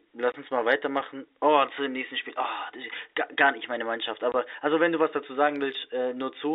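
At 0.32 to 0.34 s, just before "uns mal weitermachen", the speech drops out. It happens again at 4.32 to 4.34 s, before "also wenn du was". Both are packet loss filled with silence. Each 20 ms hole fits one lost packet. Its edges are hard.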